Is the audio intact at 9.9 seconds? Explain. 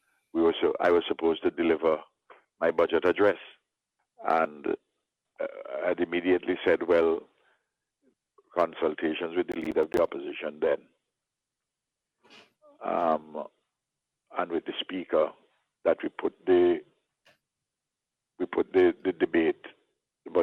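No, 9.9 seconds falls inside a burst of processor overload crackle running from about 9.52 to 9.98 s. The processor keeps missing its deadlines for short buffers of around 10 ms, and each miss drops a hard-edged sliver of silence. A dozen or more of those gaps in a row make the gritty crackle you hear.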